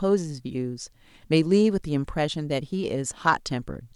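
Nothing stood out on listening to this speech recording.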